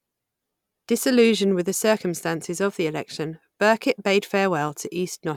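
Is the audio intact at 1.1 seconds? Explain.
Yes, at 1.1 s the speech plays through intact, with no dropout, click or other fault at that point.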